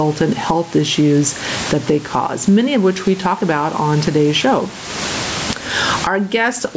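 Gain pumping throughout: the gain swings by roughly 25 dB, pulled down under each loud sound, likely a fast limiter taming excessive mic gain. The waveform looks squashed, and loud and soft parts sit closer in level.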